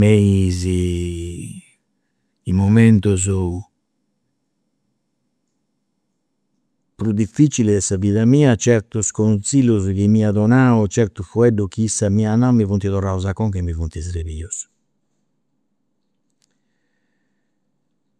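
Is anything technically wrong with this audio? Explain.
No, nothing technically wrong here.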